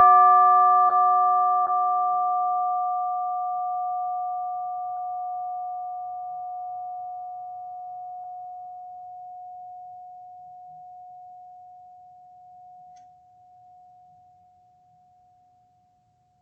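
Short concealed packet loss at 0.87, 1.63, 4.95, 8.23 and 14.42 s: 20 ms gaps in the music were bridged by extending the preceding sound, heard as brief smears or wobbles over the Opus call path's 8 kHz-limited top end.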